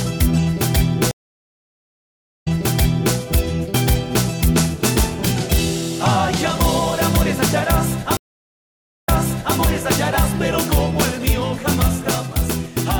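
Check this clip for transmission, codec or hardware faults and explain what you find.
Two stream reconnects. At 1.11 to 3.15 s and 8.17 to 9.56 s the link drops, goes silent for 1.3 s and 0.9 s, then a fresh decoder restarts from resent audio, replaying about 0.7 s and 0.5 s.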